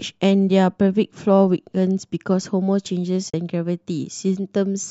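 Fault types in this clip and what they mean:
AAC frame loss with muting: coded frames went missing and the decoder zeroed them, fading into a soft-edged 40 ms gap at 3.30–3.34 s.
low-delay AAC compression: the speech was likely coded with AAC-ELD, the low-delay AAC of video calls, at 64 kbps, leaving only light coding damage.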